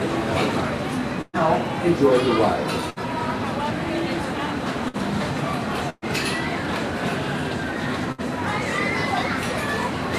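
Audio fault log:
1.21–1.36 s, 2.90–2.99 s, 4.88–4.97 s, 5.90–6.05 s, 8.12–8.21 s: burst of packet loss. The receiver filled each 54–124 ms gap by holding and fading the last sound, with brief silence at 1.21 and 5.90 s. The audio then resumes 60–120 ms further on.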